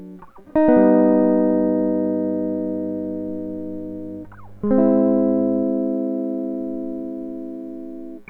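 From 1.52 s to 5.64 s a steady low drone sits beneath the music, pitched at 50 Hz with some low harmonics above it, roughly 25 dB below the music. This is mains hum: the 50 Hz power line has leaked into the signal path, as happens through a ground loop or from a transformer placed near the cabling or equipment.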